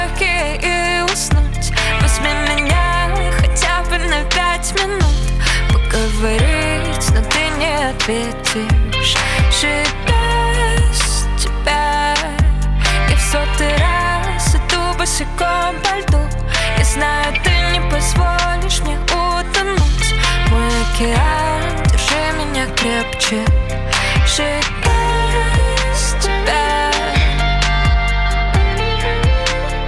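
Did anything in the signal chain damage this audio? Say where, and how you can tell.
No, nothing stood out on listening that would point to damage at any stage of the signal chain.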